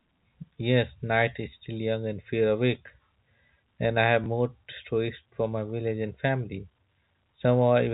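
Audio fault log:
4.24–4.26 s, packet loss with last packet repeated: a small blip between "and I have" and "more stories for my". A 20 ms gap was filled by replaying the preceding audio, consistent with one lost 20 ms packet.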